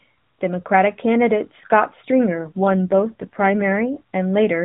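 From 2.30 to 3.84 s there's an AMR rate drop: the speech goes rougher and more synthetic, consistent with the codec stepping down from 12.2 to 5.9 kbps to protect a weak link. The narrowband band stays put, there's no gap, and the sound recovers once the rate climbs back.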